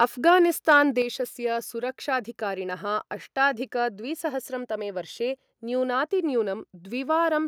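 In this speech recording, the loudest moments pick up a harsh, crackling edge at the very start, from 0.01 to 0.05 s, and again from 0.69 to 0.75 s, where the tops of the waveform sound squared off and brittle. This is likely microphone overload: the input level was set high enough that peaks ran past the converter's ceiling, by about 1 dB in the first burst and about 2 dB in the second, so a small share of samples in each burst were flattened and that flattening adds the gritty distortion. At 1.02 s the voice and the room behind it both fall in level together, suddenly, by about 6 dB, in one step rather than a gradual fade. That points to the microphone volume being stepped down, likely by the call software reacting to the distorted peak just before it and lowering the device's input gain in a single jump.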